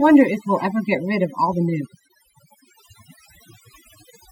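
Overdone noise removal runs throughout this short speech clip, from start to finish. A noise reduction stage set too aggressively is cutting individual frequency bands whenever their level sits near its noise estimate, so the background drops and breaks up into twinkling, chirpy specks. Softer parts of the voice fall under the same threshold and get pulled down with the noise.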